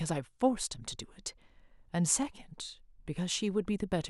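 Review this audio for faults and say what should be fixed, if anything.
Nothing here needs fixing; I listened through the speech and didn't hear any faults to flag.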